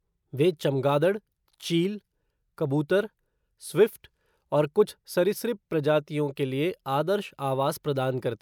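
Nothing technically wrong turns up anywhere in this bit of speech, so there's simply no fault to point to.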